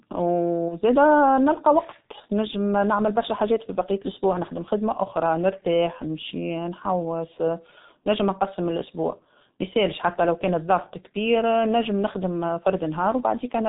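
The whole clip goes through a G.723.1 codec, and it's heavily damaged. The bandwidth tops out around 4 kHz, which fits the codec's low rate of about 6.3 kbit/s. The speech comes across muffled and a bit hoarse. Because the voice model only updates every 30 ms frame, consonants smear into their neighbours instead of landing crisply, and the voice texture has that grainy, slightly rough sheen of early internet telephony.

Early on, from 0.68 to 0.75 s, there's VoIP packet loss concealed by the speech codec. The gap points to a single lost 30 ms frame. With no data, the decoder extended the last pitch and filter settings it had while turning the level down, so that stretch turns into a brief smear that fades. The damage runs past the lost frame itself, because each frame is decoded from the one before. The voice stays weak or distorted for a few tens of milliseconds after real packets resume.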